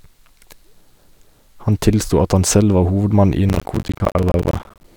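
From 3.49 s to 4.84 s, just after "hovedmann i", the speech turns gritty and torn, with a dense crackle of tiny dropouts riding on it until the load eases. This is processor overload crackle. The processor repeatedly failed to finish its short audio buffers in time, roughly 10 ms each, and roughly 70 deadlines were missed again and again over that stretch. Each miss left a brief hard-edged gap of silence, and those gaps together make the crackle.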